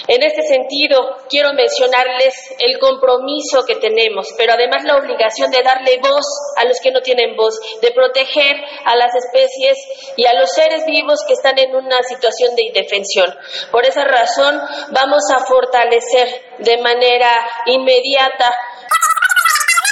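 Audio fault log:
18.89–19.91 s wrong sample rate: the sound runs 2.76 times fast and about 17.6 semitones higher together, which fits 16 kHz audio played at 44.1 kHz, unlike a pure pitch shift.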